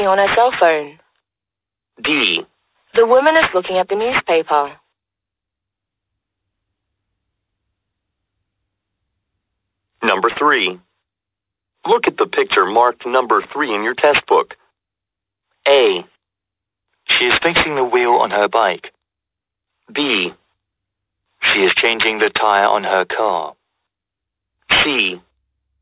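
Aliasing throughout: content above 4 kHz folds back as unrelated pitches, which fits an unfiltered drop from 48 kHz to 8 kHz, leaving a gritty, metallic edge.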